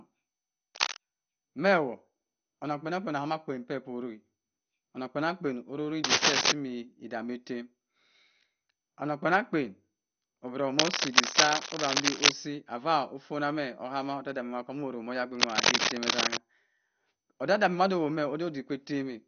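Throughout the speech, a likely MP2 compression stage with too few bits has switched off the upper sub-bands, leaving nothing above 6.5 kHz, which points to a low rate near 48 kbps. The voice sounds dull, with plainly audible gurgling, granular distortion.

Cable scratch noise, likely from a worn connector or cable being moved, adds dense, uneven rustling bursts at 0.75–0.96 s (about level with the speech), 6.04–6.52 s (roughly 10 dB louder), 10.76–12.32 s and 15.35–16.39 s (both roughly 5 dB above).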